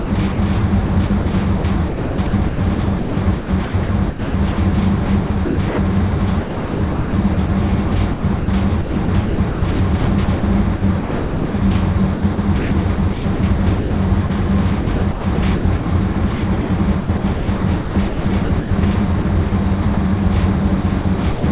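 From 0.0 to 5.78 s, 6.41 to 11.54 s, 12.14 to 14.3 s, 14.81 to 18.71 s, 19.22 to 19.97 s and 20.81 to 21.44 s, the sound is chopped, likely by the voice detector. Quieter stretches drop out to comfort noise, about 1.85 s, 2.13 s, 0.6 s, 1.56 s, 0.12 s and 0.21 s in turn, all within a band that stops at 4 kHz.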